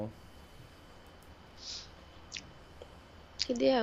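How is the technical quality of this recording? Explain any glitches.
One glitch affects the recording. From 1.36 to 1.58 s there is processor overload crackle: roughly twenty short buffers of around 10 ms missed their deadlines and were skipped, leaving hard-edged gaps heard as gritty tearing.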